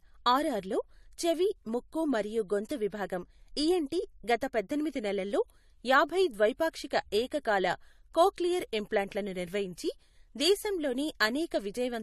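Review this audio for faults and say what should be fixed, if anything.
Throughout the speech, the top end stops dead near 12.5 kHz, with the different artefacts of each codec heard together. This points to transcoding between lossy codecs. The chain likely ran from low-bitrate AAC into MP3, which fits the later encoder spending bits on the earlier one's damage. On a spectrogram there is a flat ceiling at 12.5 kHz and patchy, blocky holes below it. Encode once to MP3 directly from the original lossless source.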